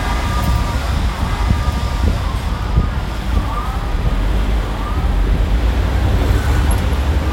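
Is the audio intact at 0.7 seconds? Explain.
No. A doubled audio track runs through the whole clip: a second full-band copy, roughly 5 dB quieter, trails about one and a half seconds behind, likely from a slower capture path. Unlike an echo or reverb, it has no decay and no room colour.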